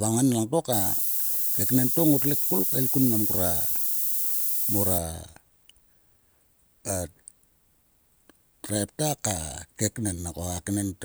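From 0.73 to 4.98 s the speech shows low bit depth with noise shaping. The signal is reduced to only 4 bits, and the rounding error is fed back so that it moves up toward the highest frequencies. The result is a thin, steady hiss that climbs sharply toward the top of the band and sits close to the level of the speech. Plain truncation would instead sound gritty and spread across the whole range.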